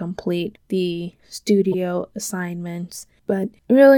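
A speech clip with one corrupt frame decoded at 1.72 to 1.74 s: a single damaged frame was played anyway, spraying energy into wrong frequencies as a brief chirp, squeak, blip or burst of noise with its error peaking near -10 dBFS. Unlike a click or dropout, it lasts one frame.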